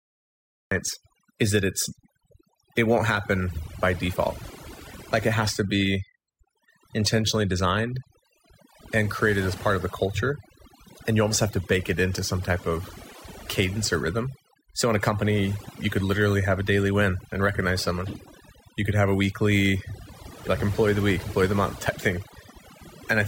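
The recording began late, a cut-off start: after digital silence, the speech enters abruptly mid-sound at 0.72 s, with no natural attack. Throughout, overdone noise removal suppresses frequency bands near the noise estimate, leaving near-silent, twinkling backgrounds and stripping quiet parts of the speech along with them.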